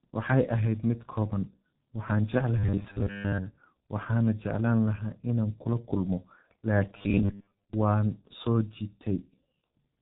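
From start to finish the speech carries the sound of the G.723.1 codec, heavily damaged. Nothing reaches above 3.8 kHz, and the coarse 30 ms framing at a rate that points to about 6.3 kbit/s leaves voices muffled and hoarse, with smeared consonants. Unlike simple low-pass filtering, which only dulls the top end, this also roughens the voice itself, because the codec's vocal model updates too slowly to track fast changes.

From 2.58 to 3.38 s the voice turns into a rigid, metallic buzz at a fixed 100 Hz. That pitch fits a 10 ms stretch of audio being replayed over and over, most likely because new data arrived too seldom and the player looped its last short buffer. Most of the real audio in that span is skipped. What separates this robotic repeated-buffer sound from ordinary codec harshness is the fixed-rate, unnatural buzz that still loosely follows the syllables.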